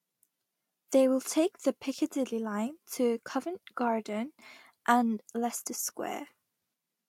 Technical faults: none

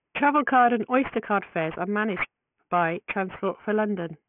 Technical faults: aliasing

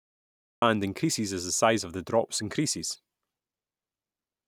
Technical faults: cut-off start

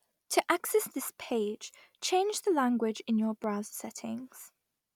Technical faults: clock drift buffer slips

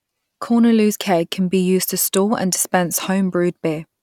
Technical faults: none

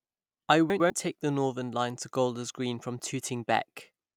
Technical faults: chunks out of order

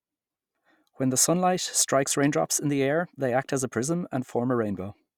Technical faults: none

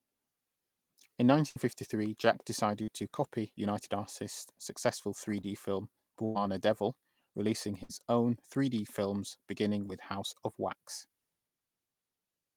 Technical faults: burst of packet loss; short concealed packet loss

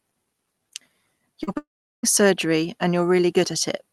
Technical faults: short concealed packet loss; long network dropout

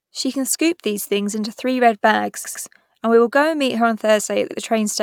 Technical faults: repeated frames

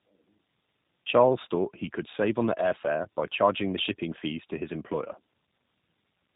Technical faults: tandem speech coding

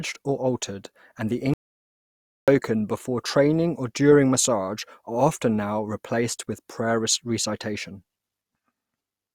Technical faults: audio dropout to silence

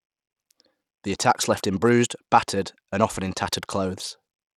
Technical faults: Bluetooth SBC compression

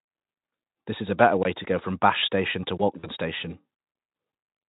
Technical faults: block of digital silence; VoIP packet loss concealed by the speech codec

